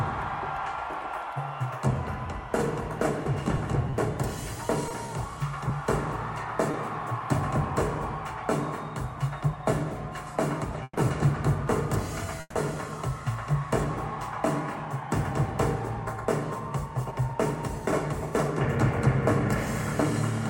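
Packets were lost or arrived late one at a time between 3.57 and 6.75 s, and the receiver patched each small hole by extending the preceding sound. About seven brief gaps, none longer than roughly 20 ms, are heard as brief ticks and smears. About 60 ms of audio is actually missing, so these are scattered short gaps. Twice, from 10.83 to 10.98 s and from 12.40 to 12.57 s, the jitter buffer likely ran dry while packets were held up in transit. Each call audio freeze stretches the last sound into a fading buzz or hiss, ending in about 30 ms and 20 ms of silence respectively. The audio then resumes exactly where it stopped, with nothing lost but 130 ms and 150 ms of delay added. From 14.85 to 17.35 s the buffer held more than its target and trimmed repeated pitch-period-sized slices, about 100 ms in all. This jitter buffer speed-up makes the sound run about 5% faster at unchanged pitch, giving a slightly hurried feel.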